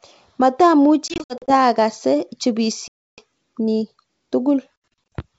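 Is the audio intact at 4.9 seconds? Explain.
No. Packet loss on an ADPCM call runs from 4.81 to 5.13 s: around ten packets drop, totalling 220 ms, and the decoder's predictor loses step. Hard-edged silent gaps result, followed by speech that returns slightly distorted.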